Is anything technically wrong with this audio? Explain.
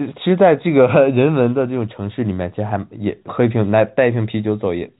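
No, nothing here is wrong: it's just speech over an ordinary telephone line, with the usual G.711 coding topping the sound out at 4 kHz and leaving only that faint level-following hiss underneath, exactly as a phone call should.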